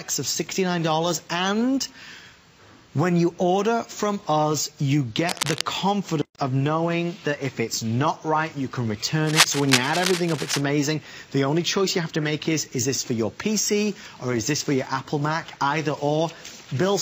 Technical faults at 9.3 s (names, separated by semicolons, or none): cable scratch noise